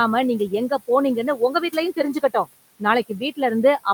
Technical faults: speech cut by the noise suppressor

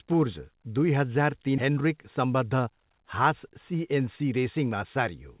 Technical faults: skip ahead; jitter buffer speed-up

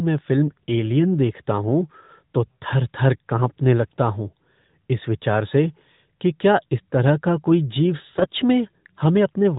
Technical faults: AMR bit errors

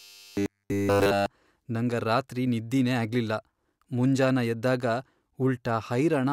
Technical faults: robotic sound from repeated short buffers

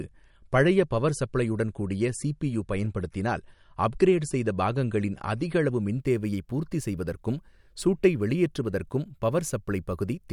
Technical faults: adaptive stream starting at a low bitrate

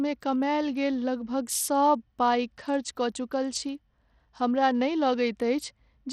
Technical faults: Bluetooth SBC compression

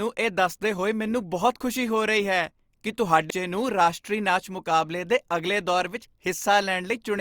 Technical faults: CD skip

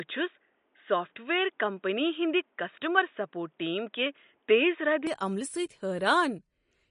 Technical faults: MP3 compression; input switched to a poorer device

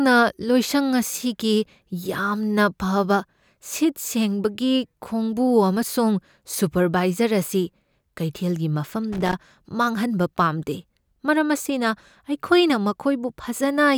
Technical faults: loose connector crackle

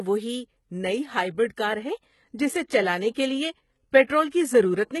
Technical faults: HE-AAC compression; pre-echo

